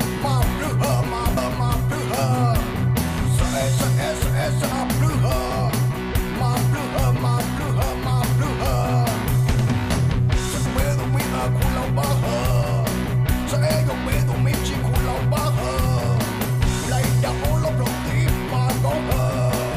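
At 1.37 s, 4.72 s and 10.66 s, damaged data in the compressed stream makes the decoder lose frame sync, producing brief glitches in the sound.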